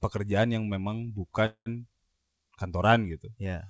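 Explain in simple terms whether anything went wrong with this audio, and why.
A call audio freeze occurs from 1.46 to 1.68 s, right after "pekerjaan yang memang". The likely cause is delayed network packets: the receiver filled about 0.2 s with a fading continuation, then near-silence, before the speech resumed intact, just later.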